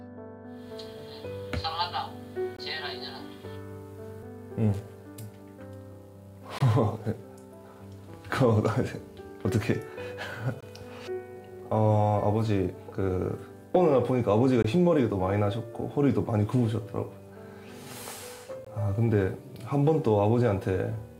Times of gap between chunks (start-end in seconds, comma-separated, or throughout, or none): 2.57-2.59, 6.59-6.61, 10.61-10.63, 14.63, 18.65-18.67